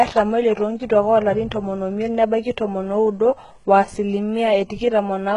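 From start to finish the speech carries heavy codec damage, most likely HE-AAC compression at a very low rate, somewhere around 12 kbps by the sound of it. The treble isn't the real thing: it's been rebuilt by copying lower bands upward, so the s sounds come out gritty and lispy, with a metallic sheen that doesn't quite match the harmonics underneath. Nothing survives above 11 kHz.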